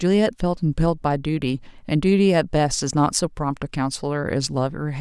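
No technical fault can be heard anywhere in the speech, from its first moment to its last.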